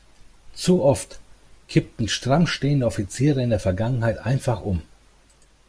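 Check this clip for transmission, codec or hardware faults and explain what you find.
No faults can be heard anywhere in this speech recording.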